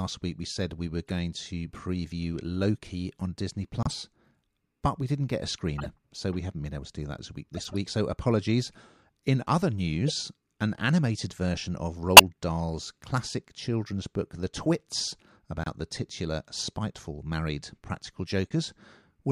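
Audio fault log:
1.07–1.11 s, 5.78–5.86 s, 7.54–7.75 s, 10.08–10.11 s, 12.17–12.21 s and 18.46–18.51 s: corrupt frame decoded. Damaged compressed frames were played anyway. Misread gains put energy at wrong frequencies. Each is heard as a short chirp or burst. The first falls after "we said we were". The second follows "we didn't get a". The fourth precedes "an animated version of". Levels range from faint, near -35 dBFS, to near full scale at 12.17 s. The 7.54 s burst spans several frames.
3.83–3.92 s and 15.64–15.67 s: corrupt frame muted. Here the decoder rejected damaged frames. Silence replaced them, so the sound drops out abruptly. Timing is kept, and the sound resumes on schedule. The first hole lasts about 90 ms, which fits three frames of roughly 30 ms. The second lasts about 36 ms, which fits a single frame.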